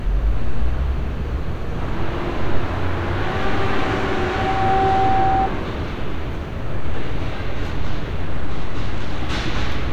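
From 4.04 to 5.49 s a loudspeaker feedback squeal appears. A 770 Hz tone, where the microphone-speaker loop gain passed one, swells within about 0.7 s to roughly the level of the surrounding sound. It shows as a brightening horizontal spectrogram line and a ballooning waveform envelope.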